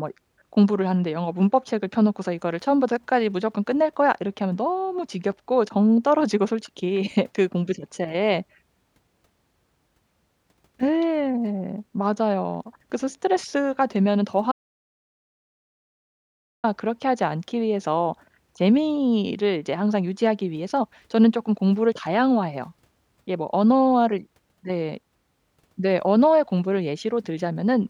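Speech recording with an audio dropout to silence from 14.52 to 16.64 s: about 2.1 s of silence with no room tone, unlike a natural pause, likely from lost input.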